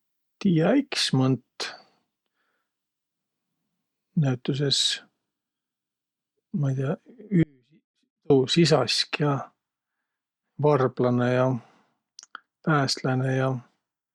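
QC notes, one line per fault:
7.43–8.30 s, audio dropout to a faint residue: the speech cuts off abruptly for about 0.87 s, leaving a faint leak roughly 40 dB down, likely a brief signal loss with the path still live.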